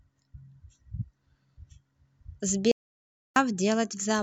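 Clock slip clicks run from 0.11 s almost to the end at 4.22 s: a fast, even tick about every 20 ms, so roughly two hundred in all, blurring into a soft rattle under the speech. Each is a single-sample jump. The likely cause is two devices on unsynchronised clocks drifting apart by something near a thousand parts per million, so a sample is dropped or doubled each time the gap reaches one whole sample.

An audio dropout to silence follows at 2.72 s and lasts until 3.36 s. The speech cuts off mid-flow and resumes 0.64 s later, and the gap is dead silence with no room tone at all, so everything spoken in that stretch is lost. The likely cause is the input signal disappearing briefly, through a lost connection or an accidental mute, while the recorder kept writing silence.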